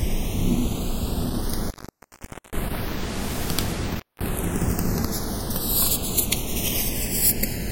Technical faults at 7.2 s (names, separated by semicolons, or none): channels drifting apart